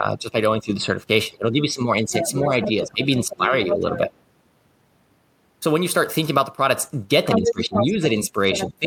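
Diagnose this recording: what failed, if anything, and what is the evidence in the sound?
Speech suppressed in double talk, at the call-processing stage. From 0.0 to 4.11 s the talker's level dips for around three seconds in total, by about 10 dB at worst. From 7.36 s to the end the drop reaches about 15 dB. The echo canceller likely mistook near speech for loudspeaker echo and attenuated both. Unlike a network dropout, these are gain dips that track the second voice, not clean silent gaps.

Other side's voice leaking through, also in call processing. A second talker is audible at 2.21–2.69 s and 3.21–3.98 s, about 5 dB under the main speech. It rises to roughly equal level at 7.31–7.93 s, then is faint, about 10 dB down, at 8.54–8.67 s. The echo canceller likely left loudspeaker pickup unremoved. It is a different voice, not a delayed copy of the talker as with room echo.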